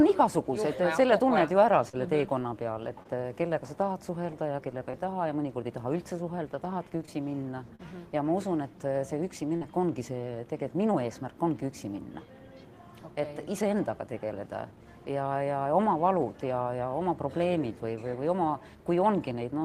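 Short concealed packet loss occurs at 1.89–1.95, 3.03–3.07, 4.91–5.00, 7.06–7.09, 7.75–7.81 and 9.57–9.63 s. Each time, 20 or 40 ms of audio arrived too late, and the receiver extended the preceding sound to bridge the gap. This leaves a brief smear or wobble, and the 4.91 s event adds a slight delay.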